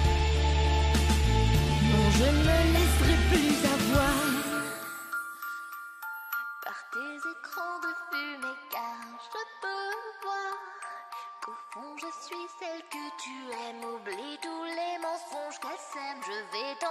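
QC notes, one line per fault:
No faults heard.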